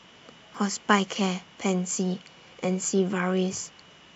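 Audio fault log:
0.55–3.66 s, clock drift buffer slips: roughly four clicks, spaced a steady 1.04 s apart, land in the speech. Such regular spacing is the signature of two devices running on separate clocks. The cause is likely a clock mismatch of around 300 ppm, which lets the buffer between them creep full or empty until a short block of about 15 samples is dropped or repeated, producing a brief tick.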